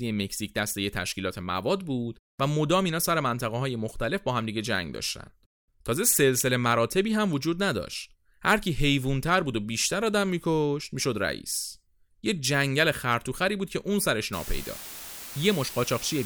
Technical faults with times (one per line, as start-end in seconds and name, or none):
14.33-16.26 low bit depth with dither